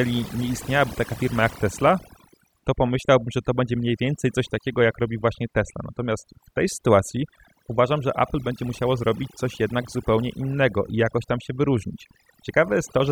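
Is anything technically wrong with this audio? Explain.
Yes. The speech shows overdone noise removal throughout. A noise reduction stage was set too strong. It pulls individual frequency bands down or off whenever they sit near its noise estimate, taking quiet parts of the speech along. The background drops away and breaks into twinkling, warbling specks.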